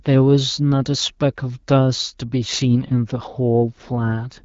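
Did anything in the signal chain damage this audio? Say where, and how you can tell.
No, nothing in the chain damaged this speech; it went through an AMR wideband (HD Voice) codec at 12.65 kbit/s, which leaves only light coding traces and nothing above 7.5 kHz, as expected for that rate.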